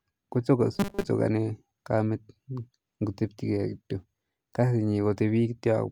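From 0.75 to 1.09 s speech becomes a rigid, metallic 200 Hz buzz. This is robotic sound from repeated short buffers, likely a 5 ms slice looping while most real audio is skipped.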